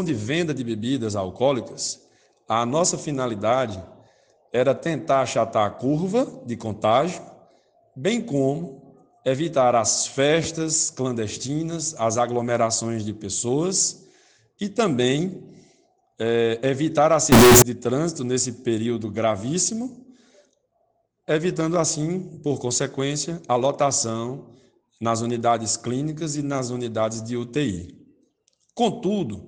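From 17.32 to 17.62 s the audio turns into a loud, harsh, nearly square waveform at an almost fixed, high level, with background noise raised to the level of the main sound. This is float read as integer, likely 32-bit float samples interpreted as 32-bit integers, so sign and exponent bits dominate the value. The pitch remains traceable.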